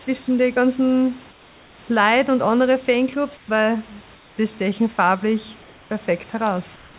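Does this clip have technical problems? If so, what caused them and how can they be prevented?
Yes. During the pauses at 1.31–1.78 s after "den ganzen", 3.37–3.48 s after "und andere", 4.15–4.38 s before "stechen farblich", and 6.76–6.94 s, the room background turns into a smooth, featureless hiss about 1 to 4 dB quieter. This is likely comfort noise in place of the background: the sender's voice detector judged these gaps silent and stopped sending audio, and the receiver filled them with synthetic noise only roughly matched to the real background. Turning off discontinuous transmission on the sending side keeps the genuine background audible through the pauses.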